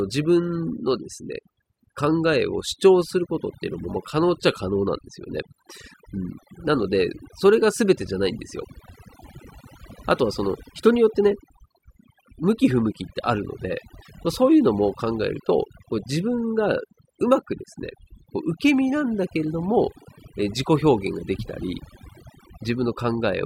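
From start to finish the speech carries overdone noise removal: an over-aggressive noise reducer shuts off individual frequency bands near its noise estimate, taking quiet speech detail too. Gaps fall nearly silent with twinkling specks, and a spectrogram shows scattered isolated dots amid black, hollowed-out bands.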